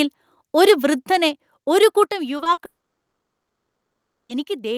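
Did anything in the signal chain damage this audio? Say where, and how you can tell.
Yes. Microphone overload runs from 1.82 to 2.03 s. Peaks there have flattened tops with a harsh, crackly edge, pushing about 2 dB past the converter's limit and clipping a small fraction of samples. This is a converter stage problem. The input volume was likely set too high, so the loudest moments hit the analogue-to-digital converter's ceiling and their waveforms were sliced off rather than captured.

Microphone volume stepped down at 1.02 s and again at 2.04 s. Voice and background drop together by about 4 dB, then about 6 dB, each in a single abrupt step rather than a smooth fade. The second step comes right after the clipped stretch. This points to call processing, likely the software's automatic gain control reacting to a too-loud or clipping input by cutting the device's input volume.

Short concealed packet loss hits the network and decoder stage three times, at 2.37–2.41 s, 2.43–2.47 s and 2.53–2.59 s. 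The first two gaps last 20 ms each and the third 40 ms. Each is heard as a brief smear or wobble where the decoder stretched the preceding sound to cover audio that never arrived, then blended back into the real signal.

A long network dropout follows from 2.65 to 4.31 s, about 1.64 s of audio never delivered. The receiver's concealment carries the last sound forward as a fading buzz or hiss for roughly 60 ms. Then about 1.58 s of silence remains until the signal resumes, with the missing portion simply gone. This was likely a network outage rather than anything at the microphone end.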